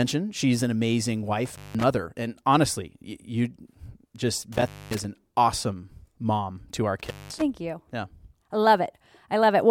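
Speech with intermittent contact: a loose connection drops the sound with edge crackle at 1.45–1.83 s, 4.52–5.04 s and 6.99–7.42 s, opening for about 180, 240 and 200 ms.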